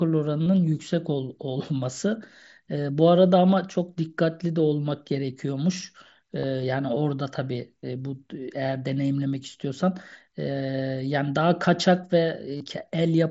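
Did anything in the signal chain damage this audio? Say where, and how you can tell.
Yes. Packets dropped on the wireless link between the Bluetooth headset and the phone, which is concealed Bluetooth headset packet loss. The receiver patched each gap by repeating the last waveform period, producing short buzzy holds at 0.45, 6.39–6.44, 7.82 and 12.57–12.61 s, with slight warbles as real audio resumes.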